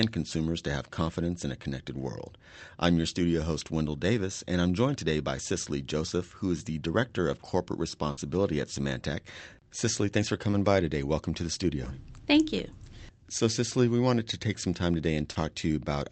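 At 8.11 to 8.19 s the speech hits a burst of packet loss. About 60 ms is continued from the last sound and faded down, then the audio jumps ahead with another 60 ms gone. On a spectrogram the last sound's spectrum freezes and dims before the later speech begins abruptly. In the waveform the envelope decays and then restarts.

Short concealed packet loss follows at 10.51 to 10.55 s, between "thanks for" and "by today", and again at 15.33 to 15.37 s after "to take some time". Each time about 20 ms is synthesised from the preceding sound and blended back, giving a brief smear. It appears as a short blurred patch in the spectrogram, with the Opus call path's cutoff at 8 kHz above it.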